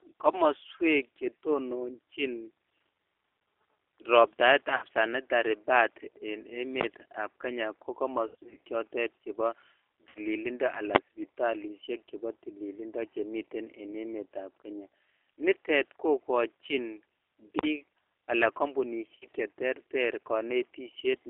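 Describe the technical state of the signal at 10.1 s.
At 10.1 s the signal is in a burst of VoIP packet loss concealed by the speech codec, running from 10.09 to 10.18 s. The decoder had no new data for roughly 60 ms, which fits six lost 10 ms frames, so it kept re-using the last pitch and filter with falling gain. Instead of a silent gap or a click, the sound smears into a fading buzzy tone or coloured noise, and the speech stays thin for a moment after data returns.

Underneath, as everywhere in the clip, the G.729 codec (the G.729A variant at 8 kbit/s) shapes the speech. Each frame is rebuilt from a vocal-tract model, a pitch predictor and a few pulses, inside a line band of about 300 Hz to 3.6 kHz. The damage is plainly audible as a rough, slightly synthetic texture, not the clean dullness of simple low-pass filtering. That steady coloration is what separates the codec from the brief concealment burst.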